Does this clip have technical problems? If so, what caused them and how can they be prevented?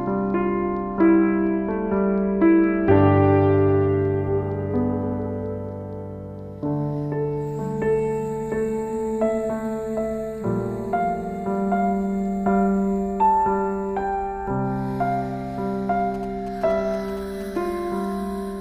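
Yes. From 16.14 to 17.57 s there are GSM signalling bursts. They form a galloping dit-dit-dit of short buzzes repeating at 217 Hz, roughly 20 dB below the main sound. A nearby 2G phone sent short radio bursts, and the audio circuit rectified them. Keep phones well away from the recording chain or switch them to flight mode.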